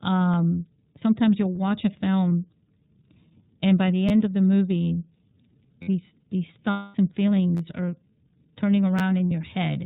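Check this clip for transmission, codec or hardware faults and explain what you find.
Three faults are present: iLBC codec coloration throughout, several lost iLBC frames, and repeated buffers.

The iLBC codec colours the whole speech clip. It sounds muffled, slightly rough and synthetic, with nothing above 4 kHz. The damage is plainly audible. iLBC is a narrowband VoIP codec that codes each frame's excitation on its own, and the quality here fits its 13.33 kbps mode with 30 ms frames.

Lost iLBC frames are heard at 2.30 s, from 6.71 to 6.96 s just after "these these", and from 9.27 to 9.32 s. Each gap becomes a held, faintly buzzy vowel lasting about 30, 240 and 60 ms. The decoder filled the missing packets by repeating the last pitch cycle mixed with noise. The longest gap fades, and the voice is right again at once afterwards.

Repeated buffers cause short stutters from 4.09 to 4.11 s, from 5.83 to 5.88 s, from 7.57 to 7.60 s just before "are turning", and from 8.99 to 9.01 s just after it. 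Each one is a hard-edged click or brief buzz. Fresh audio arrived late, so the same tiny slice of about 12 ms replayed two to four extra times, which fits a 512-sample buffer.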